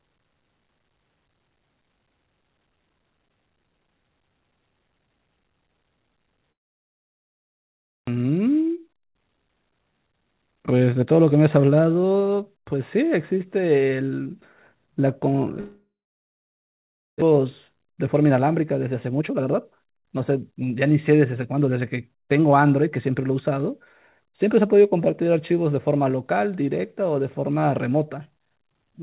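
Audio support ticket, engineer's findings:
Long network dropout, 6.52–8.10 s: brief fading buzz, then about 1.5 s of silence. About 1 s of speech lost outright; playback resumes further on. Likely cause: network outage, receiver concealment running out.
Long network dropout, 15.60–17.24 s: same signature, fading tail then about 1.3 s of silence, about 1 s missing.
Distinguishing: not a short packet-loss glitch. Concealment gives up, and content never returns.

Jitter buffer speed-up, 8.17–13.03 s: speech hurried to 110% rate, pitch unchanged. Buffer draining the backlog after the dropout by trimming pitch-period-sized chunks, roughly half a second in total.
Jitter buffer speed-up, 17.32–22.61 s: same, 111%, roughly half a second removed.
Distinguishing: not resampling or clock drift, since pitch stays put and only tempo rises. Directly follows each dropout. G.711 A-law path band-limited to 4 kHz throughout.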